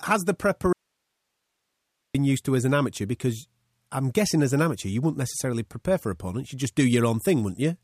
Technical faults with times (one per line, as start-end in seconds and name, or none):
0.73-2.15 audio dropout to a faint residue